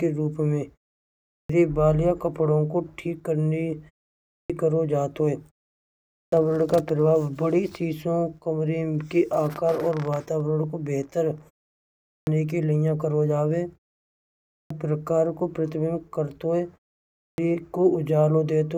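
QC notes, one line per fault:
1.15, 4.17 (right after "ठीक करने"), 5.99, 11.9, 14.39 and 17.06 s: clipped start after a pause. Each time, after roughly 0.35 to 0.7 s of silence, about a third of a second of the onset is missing while the output wakes back up, so the speech starts abruptly without its first sounds.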